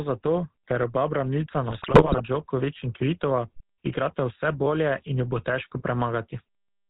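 A buzzy, gravelly roughness runs through the whole recording, with nothing above 4 kHz and a plainly audible coarseness on every syllable. It is the sound of the GSM full-rate codec, whose bandwidth and grain fit a 13 kbps setting. It models the vocal tract as a filter and drives it with a regularly spaced pulse excitation that keeps only every third sample. That sparse excitation is what makes the speech rasp.

From 1.68 to 2.21 s the speech breaks up into squawks, pops and gargling. These are GSM bit errors, flipped bits that reached the speech decoder. When they land on the filter, pitch or gain values, the decoder reshapes the spectrum wrongly or sends the level jumping for a frame at a time. The burst sounds like it spans a couple of dozen consecutive frames, consistent with an error rate near 3 percent.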